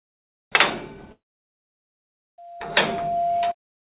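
This everyday-sound recording, carried over a call path whose content stops at 4 kHz (which fits narrowband G.711 mu-law coding), has two faults. From 1.12 to 1.69 s there is a gap of a little over half a second, likely a long network dropout. The last sound is smeared into a fading buzz, then near-silence, and the audio resumes further on with that stretch simply missing. A brief packet-loss glitch would be much shorter and mostly concealed. From 2.38 to 3.55 s a loudspeaker feedback squeal appears as a single 691 Hz tone. It swells over roughly 0.7 s until it is about as loud as the sound itself. Electrical hum would sit steadily at the mains frequency and its harmonics instead of building up on its own.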